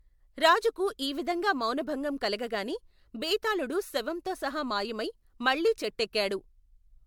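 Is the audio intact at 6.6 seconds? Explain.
No. At 6.6 seconds, as across the whole clip, the speech carries generation loss, likely from being run through an MP3 encoder about three times, with a character that fits 96 kbit/s. Each new pass quantises the audio again on a shifted frame grid, so the coding noise and gaps in the spectrum pile up. The result sounds swirly, smeared and hollow beyond what that bitrate alone would cause, and consonant attacks lose their sharpness.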